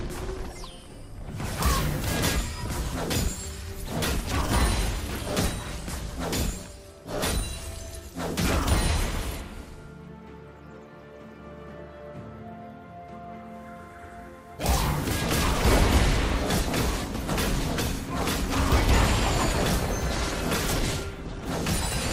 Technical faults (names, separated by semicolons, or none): DAB burbling